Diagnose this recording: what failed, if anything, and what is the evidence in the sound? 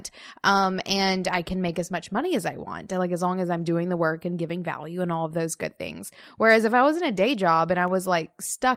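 CD scratch ticks at the disc-reading (storage) stage: after "was in a day", four evenly spaced ticks, each under a millisecond, run from 7.43 to 8.10 s. A blemish beats error correction once per revolution, and the player patches the samples. Spectrogram: thin vertical broadband lines. Waveform: tiny spikes.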